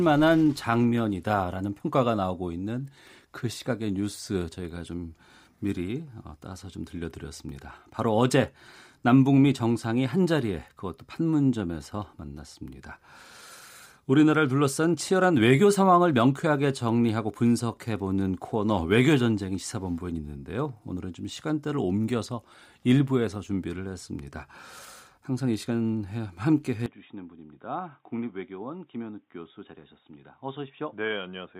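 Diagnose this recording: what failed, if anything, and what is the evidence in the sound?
At 26.86 s the speech turns dull and boxy, with no gap. Nothing passes above 3.8 kHz. The level drops about 10 dB over a new noise floor roughly 45 dB down. This is likely an input switched to a poorer device at the driver stage.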